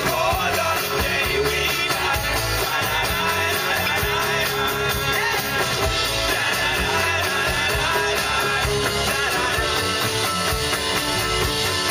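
At 3.86 to 3.89 s a corrupt frame is decoded: flipped bits inside one compressed frame send misread gains and codes to the decoder, which plays them anyway, so energy lands at the wrong frequencies for about a single frame's length. It comes out as a sharp, loud chirp-like burst peaking around -5 dBFS.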